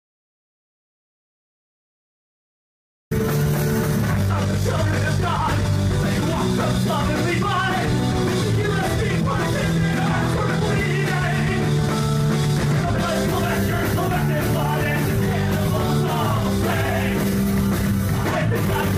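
From the very start until about 3.11 s there's nothing at all, an audio dropout to silence already under way when the clip begins. It's dead silence with no room tone, likely a lost input while the recorder kept writing, and then sound simply arrives mid-flow.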